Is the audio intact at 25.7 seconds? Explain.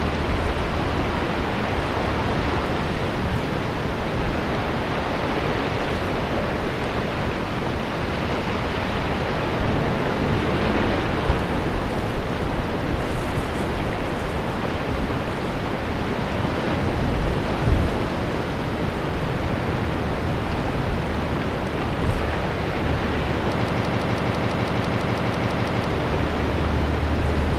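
No. From 23.67 to 25.90 s a broken-record loop replays one fragment of about 0.17 s, 13 times back to back. The stream likely stalled and kept resending its last buffered fragment, so the audio due in that span is lost.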